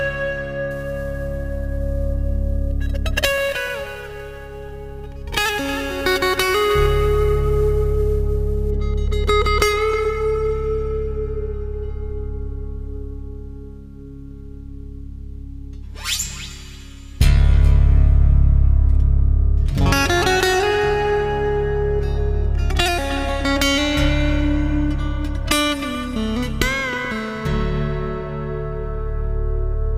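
From 0.71 s to 8.71 s a grainy hiss rides on top of the sound. It swells on loud passages and bright high-frequency material and falls away when the sound goes quiet. This is sample clock jitter. The converter's timing wanders by something like ten microseconds, so each sample is taken slightly early or late. Where the waveform changes fastest, that timing error becomes an amplitude error, leaving noise only around 20 dB below the signal.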